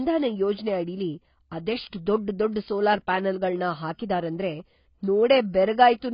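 Speech with heavy AAC compression damage throughout: nothing above 5.1 kHz, dull smeared sibilants and a warbling texture, likely from AAC-LC at a very low bitrate near 16 kbps.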